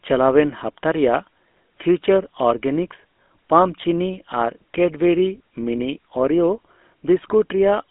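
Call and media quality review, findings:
GSM full-rate codec, whole clip: buzzy, gravelly roughness on speech, plainly audible. Band sits 250 Hz to 3.5 kHz, nothing above 3.8 kHz. Coarse regular-pulse excitation, only a third kept, behind the grit; sound fits a 13 kbps stream.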